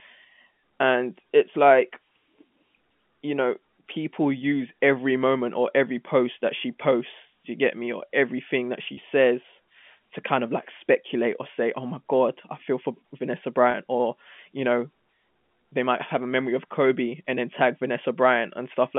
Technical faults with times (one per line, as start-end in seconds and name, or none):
8.94-8.97 packet loss with pitch repetition
13.71-13.74 packet loss with pitch repetition